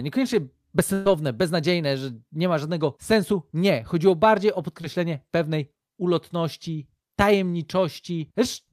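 At 0.93 to 1.07 s there is a burst of packet loss. About 120 ms of speech never arrived in time. The receiver stretched the last sound and faded it out, so a held buzz or hiss replaces the missing stretch before speech resumes further on.

At 4.81 to 4.85 s comes a short concealed packet loss. Roughly 20 ms of audio was missing. The decoder patched the hole by extending the preceding sound, then blended back. It is heard as a brief smear or wobble.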